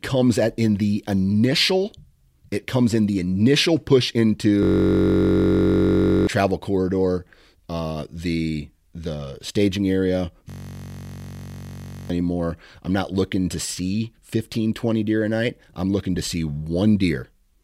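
Speech, hit twice by a system hang loop: the driver froze while the hardware recycled one 21.33 ms buffer, which fits 1024 samples, giving a steady 46.9 Hz buzz at 4.63–6.27 s and 10.50–12.10 s.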